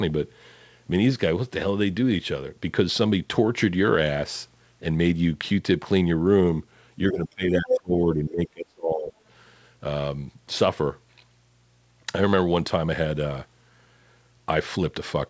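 A speech recording in which the talker's voice is pulled down between 7.12 and 9.12 s, speech suppressed in double talk, likely from an echo canceller ducking during overlap: the waveform shrinks by up to about 30 dB across roughly a second and a half of gaps. At 7.68 to 7.78 s the other side's voice leaks through as a brief scrap at about the same level as the talker, likely incomplete echo removal, showing as a short foreign burst on the spectrogram. The spectrogram's empty band above 8 kHz fits the G.722 call path.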